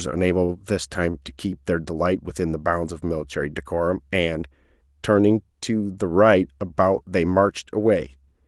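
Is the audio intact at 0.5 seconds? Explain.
No. From 0.45 to 0.51 s there is a short stall from a late packet. A packet missed its playout time and the jitter buffer ran dry, so the receiver stretched the last bit of sound for about 34 ms until the packet arrived, then resumed where it left off. Nothing is lost, but playback now runs 34 ms later, and that instant of speech is briefly held, with a faint buzz or dip, over the Opus call path's 12 kHz bandwidth.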